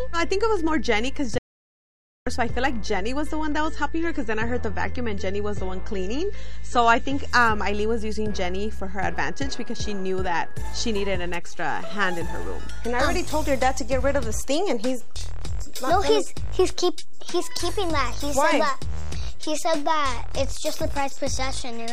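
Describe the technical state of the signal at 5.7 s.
The signal at 5.7 s sits inside a stretch of adaptive stream at a lower bitrate, running from 3.30 to 7.30 s. The connection slowed, so the player switched to a leaner encoding. Nothing remains above 8.3 kHz, and codec artefacts thicken. The quality drops and recovers abruptly, with no gap, consistent with a step from about 128 to 32 kbit/s MP3.

A DC offset is also present throughout, including at this moment. The whole waveform rides on a constant shift away from zero. It is inaudible as such, but it eats into headroom and shows up as steady energy at the very bottom of the spectrum.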